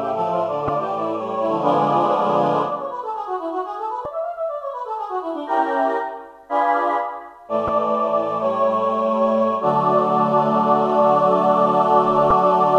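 Damaged data in a compressed stream at 0.66–0.69, 4.03–4.06, 7.66–7.69 and 12.28–12.31 s: corrupted frames make the decoder lose sync, producing brief glitches.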